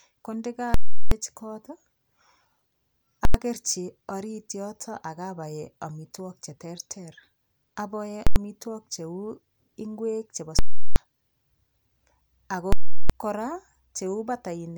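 Invalid numbers at full scale strike at 0.74–1.12 s, 3.25–3.34 s, 8.27–8.36 s, 10.59–10.96 s (just after "ng'wek chebo") and 12.73–13.10 s. In each, a calculation produced invalid values that were pinned to the largest positive or negative value, holding the output flat at one extreme, far beyond the speech peaks, for the whole block.

The 0.37 s blocks give a loud pop at each edge with silence between. The 0.09 s blocks merge into single bangs. Unlike clipping, no underlying sound remains inside the block.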